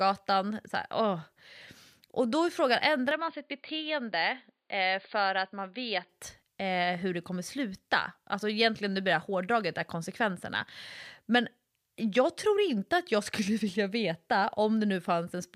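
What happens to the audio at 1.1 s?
Nothing goes wrong at 1.1 s; the speech there plays through intact, with no dropout, click, distortion or other audible fault.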